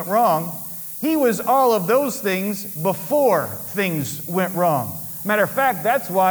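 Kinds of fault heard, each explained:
Low bit depth with noise shaping: The audio is stored with very few amplitude steps, which fits a 6-bit word, and the rounding error from each step is fed back so that its energy moves out of the lower range and up toward the top of the band. Throughout the clip this produces a constant, thin hiss that grows sharply brighter at high frequencies and sits only about 10 dB below the signal, so it is clearly audible under everything.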